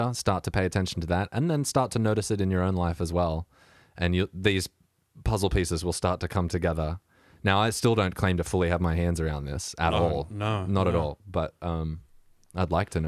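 No technical faults can be heard anywhere in the speech.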